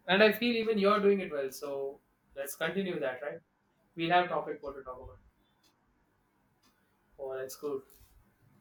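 From 0.63 s, right after "and I feel", to the end, the speech shows channel delay (comb filtering): one channel lags the other by roughly 20 ms, and the mono sum cancels at evenly spaced frequencies starting near 30 Hz, leaving a rough, slightly doubled sound.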